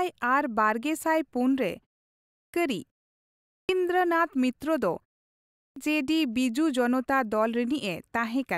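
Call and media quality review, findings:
Clipped start after a pause at 2.18 s, 3.32 s and 5.39 s: about 0.37 s of onset lost after roughly half-second gaps, from the output device sleeping and relocking. Unlike muted pauses, speech itself is cut.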